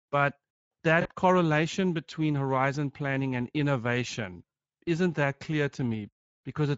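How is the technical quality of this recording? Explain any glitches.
The recording has clearly audible codec damage throughout and one short dropout near the start.

Speex codec, throughout: the speech was coded with Speex at a setting whose quality points to a bitrate around 16.8 kbps, leaving few bits for the excitation signal. That makes the speech audibly hoarse and noisy.

VoIP packet loss concealed by the speech codec, from 1.01 to 1.09 s, just before "correlation between horizon planning": about 40 ms of packets went missing, and the decoder filled the gap by extending its last pitch and filter at falling gain. The result is a brief stretched sound that fades, with the speech sounding weak for a moment after it resumes.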